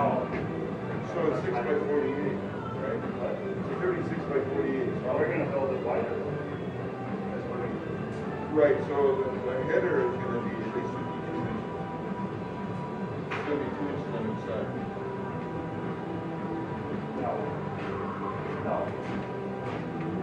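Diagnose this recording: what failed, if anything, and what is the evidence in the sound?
The codec stage let you down here: there's damaged data in a compressed stream. You get a brief glitch from 1.30 to 1.32 s and another blip at 7.66 s, where the decoder choked on corrupt frames, lost sync and skipped to the next header.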